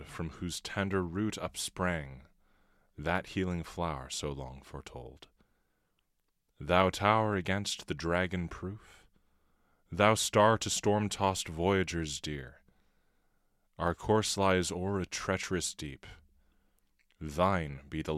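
Speech with a block size mismatch (truncated) running through the whole recording: one stage hands over longer blocks than the next stage takes in, so the tail of every block is dropped. The result is a steady buzz at about 46.9 Hz, which fits a 1024-sample block, while the speech keeps its normal pitch and plays at normal speed. A spectrogram would show evenly spaced vertical seams about 21 ms apart, and the waveform would show a jump at each block boundary.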